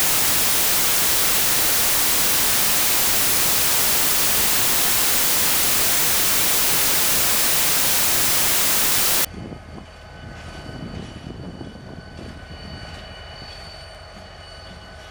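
From 0.0 to 9.25 s the sound suffers a wrong sample width: loud noise buries the original, which runs 1.33 times fast and high in pitch, which fits packed 24-bit data read as 32-bit. Unlike a plain sample-rate mismatch, the speed change arrives wrapped in heavy noise.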